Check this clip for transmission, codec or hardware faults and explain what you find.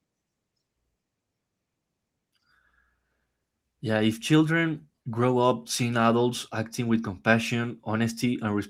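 Nothing in the signal points to a fault: the speech arrives intact and continuous, with no disturbance from the chain that carried it.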